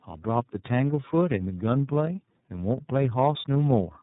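From start to finish the speech shows tandem speech coding: it was decoded and re-encoded across three speech codecs in succession, ending in what sounds like iLBC at 13.33 kbit/s. Each stage degraded the last, leaving rough, muffled, warbly speech with nothing above 3.8 kHz.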